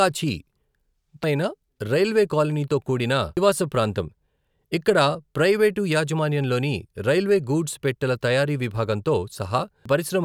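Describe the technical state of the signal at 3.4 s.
At 3.37 s, just after "రైల్వే కాలనీతో కూడిన", the compressed speech stream carries damaged data: a stretch of the encoded bytes is wrong, so the decoder cannot read the frame there, loses sync and skips forward to the next valid frame header before resuming. To the ear this is a brief chirp or blip cutting into the speech.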